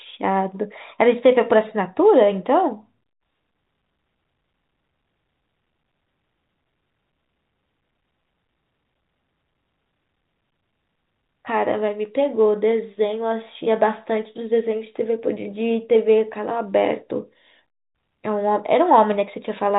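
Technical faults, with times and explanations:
No technical faults are audible anywhere in this recording.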